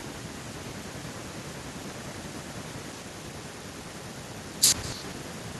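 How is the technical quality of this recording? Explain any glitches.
The recording has one fault running through the whole speech clip. Echo with no canceller, throughout: the far end's loudspeaker feeds its microphone, and nothing strips that out. Every phrase returns about a fifth of a second later as a faint, thin copy, roughly 23 dB below the speech.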